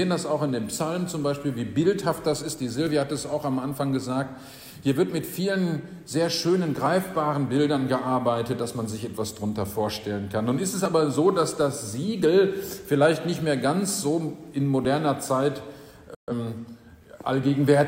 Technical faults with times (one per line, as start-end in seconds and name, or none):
2.87 audio missing between chunks
6.86 audio missing between chunks
10.86 audio missing between chunks
14.85 audio missing between chunks
16.15-16.32 digital broadcast dropout